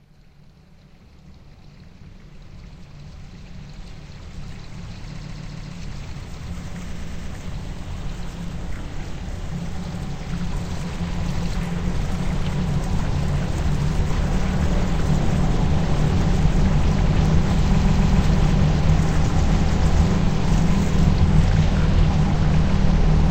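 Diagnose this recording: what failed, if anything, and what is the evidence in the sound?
Repeated frames, a codec or storage fault: the same block of sound replays at 5.16–5.71 s (about 139 ms, four extra times), 6.94–7.29 s (116 ms, three) and 17.76–18.18 s (139 ms, three). Unlike a dropout, nothing is lost; audio stutters and lengthens.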